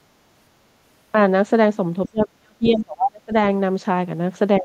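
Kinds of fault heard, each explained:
Speech suppressed in double talk: The speech sinks sharply from 2.09 to 3.33 s, dropping by something like 35 dB at its deepest for about a second in all. A briefer dip of roughly 20 dB clips the very end, at 4.59 to 4.64 s. The likely cause is an echo canceller facing both sides talking at once: unable to tell the near talker from loudspeaker echo, it turned everything down.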